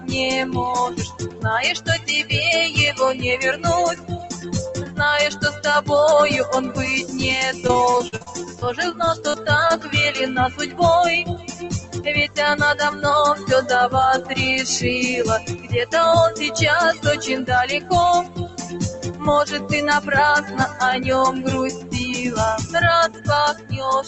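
Throughout the clip, a noise suppressor built for speech is applied to music or sounds. It treats sustained and ambient parts of the audio as noise, so its gain swings by roughly 15 dB. Onsets pass while held material and decays sink, giving a pumping, fluttering, thinned character. On a spectrogram, energy between attacks looks patchy and eroded. The waveform envelope dips and recovers unevenly instead of decaying smoothly. All content sits below 8 kHz, the band of the call path.

Sound cut by the noise suppressor is clearest in four spans: 0.0 to 5.89 s, 7.02 to 14.34 s, 15.40 to 20.81 s, and 21.72 to 24.08 s. In these spans the suppressor pulls portions of the sound down by as much as about 12 dB, and about 13 dB in the last span. The affected material adds up to roughly 2 s, 3 s and 2 s in the first three spans. Tails are clipped short, which shows as abruptly truncated decays in the spectrogram and sudden level steps in the waveform.

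Repeated packet loss (robotic sound) runs from 7.67 to 9.72 s, inside the second suppressed span. Around fifteen holes open in quick succession, the longest 46 ms, and each is patched by extending the preceding audio. About 16% of the stretch is concealed this way, which makes it choppy. A spectrogram shows smeared, repeated frames and short dropouts. The waveform shows small gaps and copied-looking segments.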